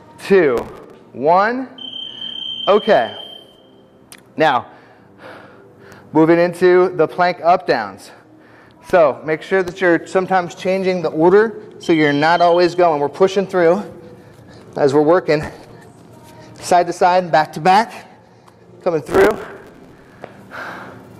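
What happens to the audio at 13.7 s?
Nothing goes wrong at 13.7 s; the audio there plays through intact, with no dropout, click, glitch or other fault.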